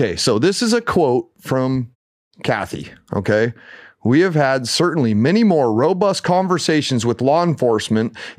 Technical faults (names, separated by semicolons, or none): none